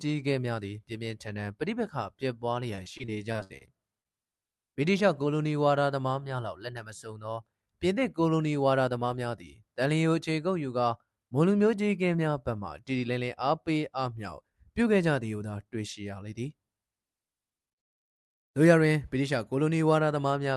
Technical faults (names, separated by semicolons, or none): repeated packet loss (robotic sound); short concealed packet loss